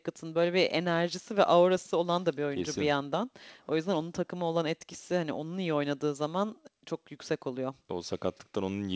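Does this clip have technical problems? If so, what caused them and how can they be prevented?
No, there are no technical problems in this speech clip. It has clearly passed through a call path, with nothing above 8 kHz, which fits a wideband codec such as G.722 at 64 kbps.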